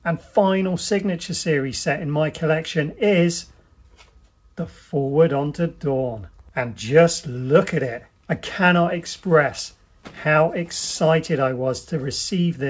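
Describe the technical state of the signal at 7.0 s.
At 7.0 s the signal is intact, with no fault present, and the audio carries the call path's normal band limit, with nothing above 8 kHz, as expected from a G.722 call codec.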